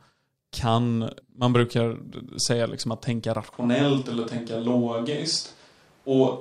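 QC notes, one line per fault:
3.53 s to end, switch to a distant microphone: just after "säga liksom att tänka" the speech turns suddenly roomy and hollow, with thinner bass, little change in level, and background noise around 35 dB below the speech, likely because the close microphone dropped out, leaving a farther one.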